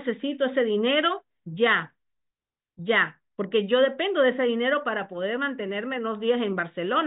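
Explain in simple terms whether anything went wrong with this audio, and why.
Nothing went wrong with this audio; the speech comes through without any technical fault.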